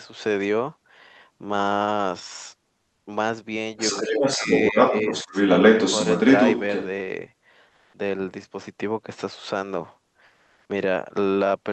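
From 3.77 to 6.87 s a second voice runs under the speech, somewhat louder than the talker. This is the other side's voice leaking through. The talker's device likely played the far end on a loudspeaker, and the echo canceller left part of that sound in the microphone signal, so the remote talker comes back along with the local one.

Inside that same stretch, the talker's own speech sinks twice, at 4.03 to 4.48 s and at 5.1 to 5.33 s. Each dip is about 10 dB at its deepest, with the first lasting longer and the second only a brief scrap. This is speech suppressed in double talk. With both sides speaking at once, the echo canceller likely could not separate its own talker from the loudspeaker echo and turned the whole signal down.

Two pauses then lose their real background. At 7.69 to 7.93 s, about 240 ms of room sound becomes a smooth, featureless hiss roughly 9 dB louder than before. At 10.25 to 10.69 s, 440 ms is replaced the same way, this time about 9 dB quieter. 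This is comfort noise in place of the background. The sender likely stopped transmitting in silence through Opus discontinuous transmission, and the receiver filled each gap with synthetic noise. The call's Opus coding keeps the audio band up to about 8 kHz.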